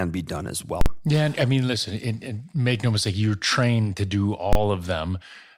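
At 0.81 to 0.86 s, right after "be done as", the speech breaks into invalid numbers at full scale. A calculation produced infinite or invalid values that were pinned to an extreme, so the output holds flat at one extreme value, far beyond the speech's peaks, for 46 ms. This fits a 2048-sample block. A second, 23 ms hold at 4.53 to 4.55 s after "you're trained to do" fits a 1024-sample block. The first is heard as hard pops at the edges with dead silence between, and the shorter second as a single bang. Clipping would instead distort the waveform without flattening the whole block.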